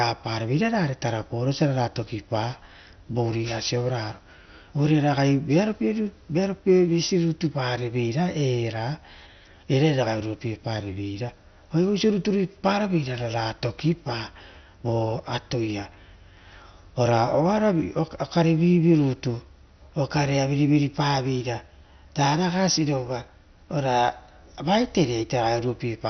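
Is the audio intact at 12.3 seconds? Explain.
No. At 12.3 s, as throughout, the speech has nothing above about 6.1 kHz and a gurgling, granular roughness, likely MP2 compression at a low rate near 48 kbps, with upper sub-bands switched off and the remaining bands coarsely quantised. Flickering bands and grain set it apart from a clean low-pass filter.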